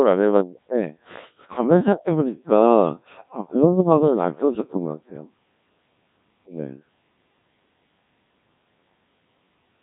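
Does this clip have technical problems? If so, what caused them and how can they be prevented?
Yes. The speech sounds robotic and buzzy throughout, with nothing above 3.8 kHz. This is heavy Codec 2 vocoder damage, at a rate consistent with about 1.3 kbit/s. Only pitch, voicing, energy and a coarse spectral envelope survive, and the decoder rebuilds the speech from sine waves instead of the original waveform. To prevent it, record or send through a waveform codec such as Opus at a healthy bitrate rather than a low-rate radio vocoder.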